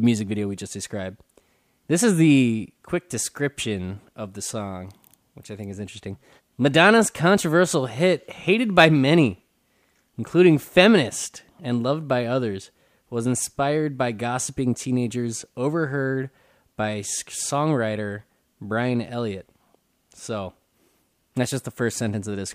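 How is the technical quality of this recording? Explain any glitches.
No glitches or faults audible.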